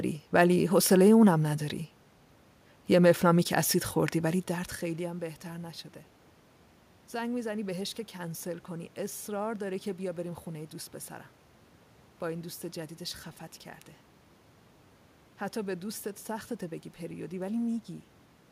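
No technical faults can be heard in this speech recording.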